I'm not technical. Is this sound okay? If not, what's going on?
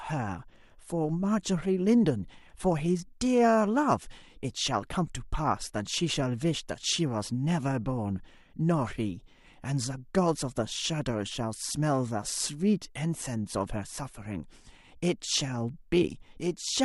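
Yes, this one's fine: there's nothing wrong to point out anywhere in the recording, so you can relax.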